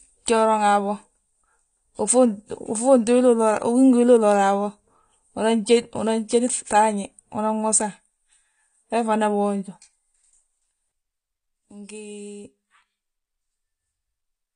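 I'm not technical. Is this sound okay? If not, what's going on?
No. Throughout the speech, everything above about 9.6 kHz is missing, so it sounds dull and smeared, with a watery, fizzy edge on hissy sounds. That points to AAC compression, likely squeezed hard to save space, discarding detail the encoder judged least noticeable.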